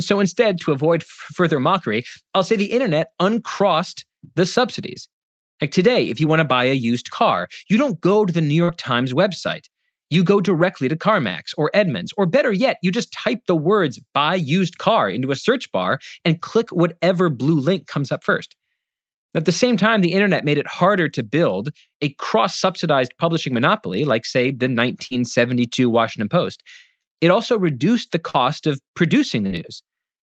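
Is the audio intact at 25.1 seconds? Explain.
No. Just after "monopoly like say the", from 25.07 to 25.14 s, there is a short concealed packet loss. About 40 ms of audio never reached the decoder in time, and the receiver filled about 37 ms of it by extending the preceding sound before blending back into real audio. It is heard as a brief smear or wobble. On a spectrogram, that stretch shows flattened, repeated harmonics or featureless noise instead of normal articulation.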